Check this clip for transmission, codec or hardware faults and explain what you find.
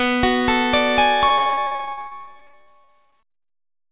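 One transmission fault stands out: repeated packet loss, heard as robotic sound, from 1.28 to 3.52 s. Packets kept arriving late or not at all, and the receiver filled each hole by extending the preceding audio. The gaps come in quick succession, dozens of them, the longest about 59 ms, and patched material makes up roughly a third of that stretch. The result is choppy audio with pieces missing. The call path itself carries nothing above 4 kHz, which fits a narrowband telephone codec such as G.711.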